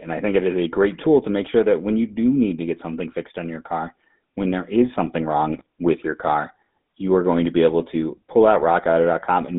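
Throughout, the GSM full-rate codec gives the speech a buzzy, gravelly roughness, which fits 13 kbps coding; the spectrogram shows energy confined to 150 Hz to 3.7 kHz.

From 5.5 to 5.66 s, between "when there is something" and "with your car you", GSM bit errors corrupt the decoder's parameters, causing squawks and gargling. The waveform shows level spikes, and the spectrogram shows smeared, distorted bands.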